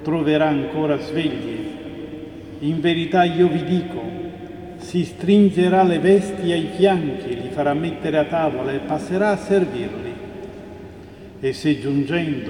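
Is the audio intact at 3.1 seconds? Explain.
Yes, at 3.1 seconds the audio plays through intact with no fault present.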